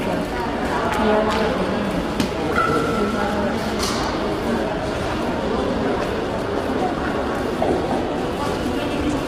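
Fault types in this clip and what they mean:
Low-delay AAC compression: Across the whole clip the sound is rough and grainy. A hissy fill sits between the tonal components, and the top band sounds thin and synthetic. This heavy damage is likely from AAC-ELD at about 24 kbps, whose short frames separate harmonics poorly and leave too few bits. On a spectrogram, harmonic lines look smeared with noise between them, and the upper band appears patchy or blocky rather than finely detailed.
Electrical switching spike: Two sharp snaps land on top of the sound at 0.94 s and 4.03 s, each lasting only a few milliseconds. They are likely arcs from a nearby switch, motor or static discharge picked up by the audio line, not part of the recorded sound itself. In the waveform each appears as a thin vertical spike jutting out from the surrounding signal. On a spectrogram it shows as a narrow bright column spanning nearly the full frequency range.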